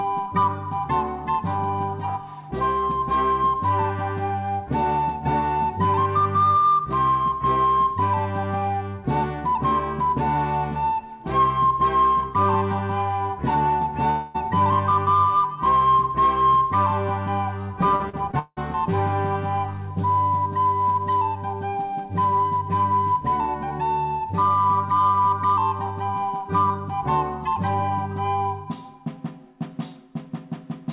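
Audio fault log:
14.10–14.36 s, long network dropout: for about a quarter of a second the sound is replaced by a buzzy continuation of what came just before, fading but never reaching silence. When the audio returns, roughly 0.24 s of it is simply gone, which most likely points to a single run of packets that never arrived. It is one unbroken hole, not the stuttering series heard later, so it reads as a single smear and then a jump forward.
17.96–18.59 s, repeated packet loss (robotic sound): over about 0.6 s the sound breaks up four times. Each gap is patched with a short repeat of the previous sound. The longest gap is about 0.18 s, and around 42% of the stretch is concealment rather than real audio. Unlike the single dropout, the holes come in quick succession, so the result is choppy and robotic instead of one continuous buzz. Because of the call path, none of this carries anything above 4 kHz, consistent with G.711 mu-law at 64 kbps.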